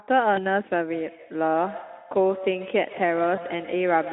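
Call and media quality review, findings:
VoIP packet loss concealed by the speech codec, 0.35–0.47 s: brief buzzy smear, then the speech stays weak for about a tenth of a second. Fits one lost 20 ms frame; the decoder extrapolated pitch and filter, and recovery lagged because each frame builds on the last.

Same packet-loss concealment, 3.35–3.44 s: another short buzzy dropout with a slightly shorter tail. Looks like a single 20 ms frame again, with the narrowband Speex decode carrying over the damaged state for a few frames.

Feedback echo between two devices, 0.93 s to the end: thin, ringing repeats of the speech about every 150 ms, peaking about 15 dB below the direct signal. Probably a second device in the same room playing the call back into a mic its canceller can't see.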